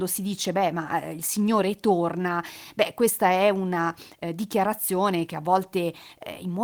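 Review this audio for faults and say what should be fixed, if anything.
No faults can be heard in this audio, so nothing needs to be fixed.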